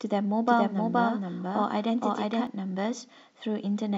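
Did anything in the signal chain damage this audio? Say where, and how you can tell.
Yes. From 0.47 to 2.47 s there is a doubled audio track: a dry, full-band copy of the speech trails by about half a second at roughly equal level, cutting in and out abruptly. This likely comes from a second, slower capture path or an editing overlap.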